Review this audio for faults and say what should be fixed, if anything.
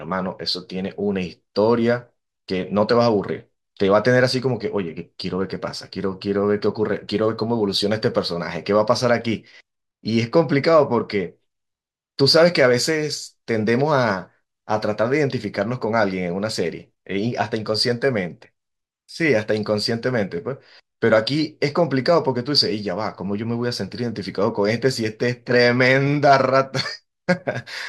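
Nothing to fix: no faults found in the speech.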